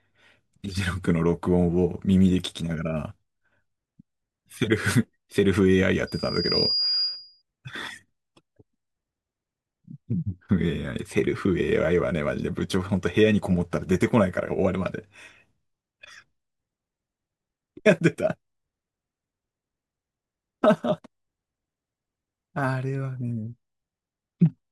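From 6.07 to 7.42 s, a microphone was picking up the loudspeaker it fed, and the loop's gain rose above one at 4.8 kHz. The resulting loudspeaker feedback squeal swells over about half a second into a piercing tone roughly as loud as the speech.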